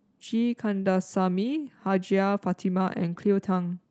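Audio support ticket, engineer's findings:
Short stall from a late packet, 0.82 to 0.85 s. Jitter buffer ran dry waiting on a late packet; receiver stretched the last sound about 16 ms, then resumed in place. Nothing lost, but a brief held sound with slight buzz or dip; playout runs 16 ms later afterward. Opus call path top end cut at 8 kHz.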